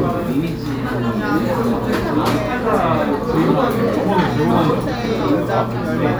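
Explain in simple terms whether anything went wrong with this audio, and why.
A steady mains hum runs through the whole recording, from start to finish. This low 60 Hz tone, fairly loud next to the sound itself, comes from power-line electricity leaking into the signal, typically through a ground loop or a nearby transformer.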